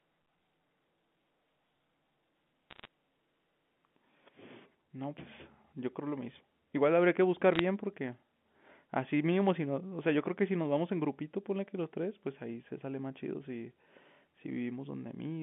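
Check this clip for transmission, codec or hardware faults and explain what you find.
Two short bursts of bit errors on a digital phone line, from 2.70 to 2.87 s and from 7.53 to 7.59 s. Flipped bits, well under one percent, each corrupt a single sample. Hits on sign or high bits snap to wrong values, so sharp ticks crackle over speech that stays intact. Packet loss would instead leave gaps or smeared repeats. The G.711 telephone coding carrying it keeps its narrow 150 Hz to 3.5 kHz band.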